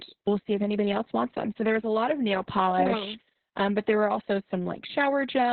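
Opus voice compression runs from start to finish of this speech clip. The band is cut off near 4.2 kHz, so the codec's SILK linear-prediction coder has fallen back to narrowband, which points to a very low bitrate, around 6 kbps. With so few bits, the excitation driving each predicted frame is coded coarsely. The result is muffled, hoarse and faintly robotic speech with heavy codec damage.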